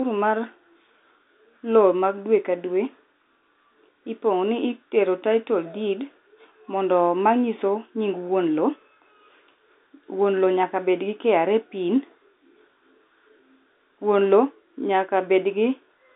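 No faults can be heard in this telephone-band speech.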